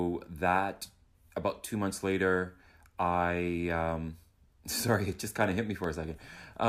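Speech with periodic USB or driver dropouts from 4.94 to 6.64 s: about twenty tiny silent gaps every 0.1 s, heard as steady ticks, showing as evenly spaced vertical lines on a spectrogram.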